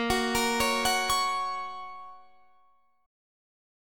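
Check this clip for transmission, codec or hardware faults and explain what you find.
One fault is present. Damaged data in a compressed stream shows up from 3.02 to 3.05 s. For those few hundredths of a second, the bytes reaching the decoder were wrong, lost or overwritten. The decoder could not read the affected frames, fell out of sync and had to hunt for the next valid frame header before playback resumed. It comes through as a short chirp, squawk, click or hole cutting into the sound.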